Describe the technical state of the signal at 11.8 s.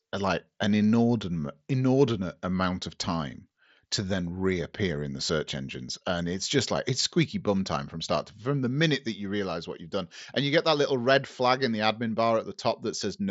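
At 11.8 s the signal is intact, with the speech coming through the Bluetooth mSBC headset path and its band ending near 7.7 kHz.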